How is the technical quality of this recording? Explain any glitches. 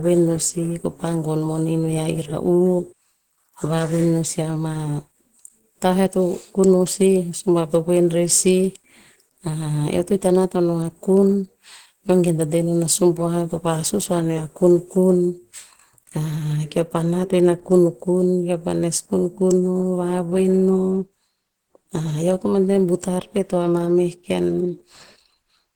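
The quality is limited by one fault that runs through the whole speech recording. Throughout, the audio carries the smeared, watery artefacts of heavy compression, though the frequency range reaches about 20.1 kHz. The likely cause is low-bitrate audio saved at a high bitrate. A very low-rate first encode, around 16 kbit/s and Opus-like, was re-saved as a large MP3. The second encode cannot restore what the first discarded.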